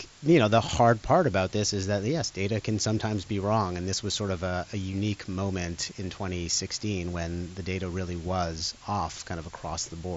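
From start to finish the speech sits on a constant, even hiss, the signature of low bit depth with dither. The samples are rounded to very few levels, which fits a word length of around 7 bits, and dither added before rounding turns that coarse quantisation error into steady white noise rather than distortion. The hiss stays at roughly 20 dB below the speech throughout, spread evenly up to the band edge near 7.7 kHz set by the mSBC headset link.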